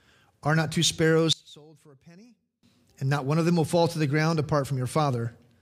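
From 1.33 to 2.63 s, right after "not two sparrows", the speech collapses by about 28 dB into a faint residue. The likely cause is one channel inverted: one stereo side has its polarity flipped, so the centred speech cancels when the two are summed to mono, leaving only their small differences. Unlike a plain dropout or gain dip, the sound doesn't go silent or simply quieter. What survives is a faint copy of the speech.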